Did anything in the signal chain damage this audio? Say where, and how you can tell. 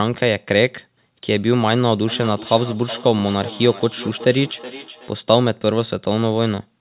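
Yes. At the call-processing stage there's feedback echo between two devices from 2.08 to 5.14 s: one device replays the other's sound, and that sound comes back roughly every 0.4 s at up to about 15 dB below the speech. On a spectrogram this appears as fainter, thinning copies of each syllable at that spacing, cut off at 4 kHz, a band limit that fits a G.711 call codec.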